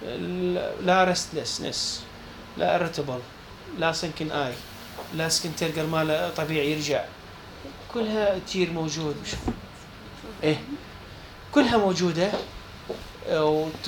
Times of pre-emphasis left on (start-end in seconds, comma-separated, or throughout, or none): 4.52-6.92